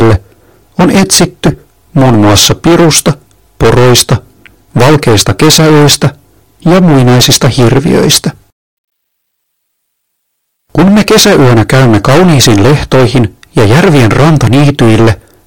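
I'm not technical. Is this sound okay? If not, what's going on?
No. Hard clipping runs through the whole clip, from start to finish. The speech was pushed far louder than the recording chain could carry, so the tops of the sound waves were sliced off flat, and nearly a third of the sound sits pressed against that ceiling. Those flattened shapes create extra, unnatural high tones, which you hear as a harsh, buzzy fuzz on every loud sound rather than just the odd crackle.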